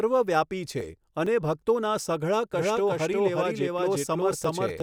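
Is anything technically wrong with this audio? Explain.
Yes. From 2.53 s to the end, a doubled audio track appears, likely from a second, slower capture path mixing the same speech back in. An undecayed copy trails the original by roughly 400 ms at about equal level, switching on abruptly and repeating everything after.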